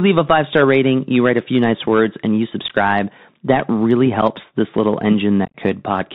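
Throughout, the Bluetooth CVSD headset codec limits the speech to below 4 kHz. Its one-bit delta coding, consistent with a 64 kbit/s CVSD link, adds granular hiss and scratchy sibilants. At 2.68 s, after "nice words and you", unconcealed Bluetooth headset packet loss cuts an abrupt 15 ms hole, roughly two packets. At 4.22 s, between "that really" and "this little", a single lost packet leaves a 7.5 ms gap. From 5.45 to 5.56 s, after "this little", losses totalling about 68 ms are scattered across 90 ms, with the longest run 22.5 ms. That stretch sounds chopped and crackly.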